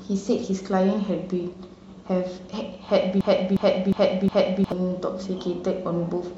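Speech, with a broken-record loop from 3.21 to 4.72 s where a 0.36 s snippet plays four times, likely a stalled stream resending its last chunk.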